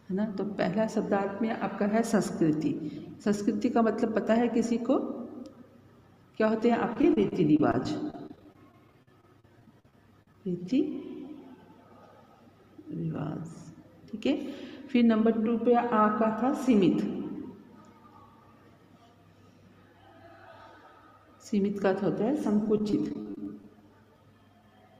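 Repeated packet loss (robotic sound) affects the audio from 6.93 to 10.35 s and again from 22.64 to 23.68 s. Short dropouts up to about 45 ms are patched by extending the preceding sound, so about 16% and 19% of the two stretches is concealed and they sound choppy.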